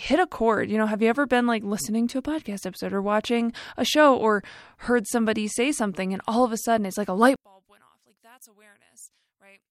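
One channel inverted, from 7.36 s to the end of the speech at 9.7 s: just after "sudden it's like a", the centred voice collapses by about 29 dB, leaving only a faint residue. Everything both channels share cancels, so what remains is merely the small difference between them. The likely cause is reversed polarity on one stereo channel, with the signal then summed to mono, so left and right subtract rather than add.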